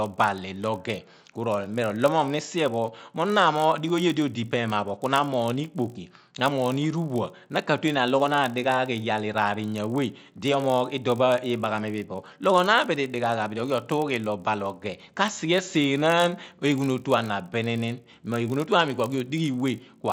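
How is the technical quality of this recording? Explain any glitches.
The recording is compromised by a steady buzz tied to the speech. Throughout the clip, a resampler restarted on every block is treating each 20 ms chunk in isolation, likely while converting from 16 kHz to 48 kHz. Each chunk edge lacks its true neighbouring samples, leaving a small error there. These errors repeat at 50 Hz, heard as a buzz that sits under the speech and drops away in the pauses.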